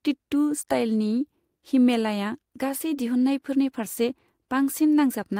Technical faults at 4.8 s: none

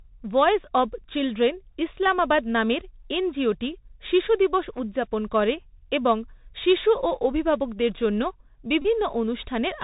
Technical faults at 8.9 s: Bluetooth CVSD headset codec; Bluetooth headset packet repeated

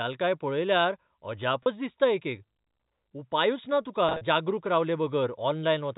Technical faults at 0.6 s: none

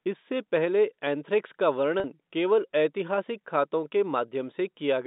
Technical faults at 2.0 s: packet loss with pitch repetition

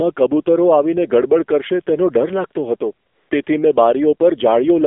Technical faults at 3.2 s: AMR narrowband mobile codec; AMR comfort noise

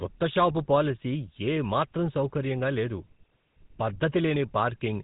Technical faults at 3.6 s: GSM full-rate codec

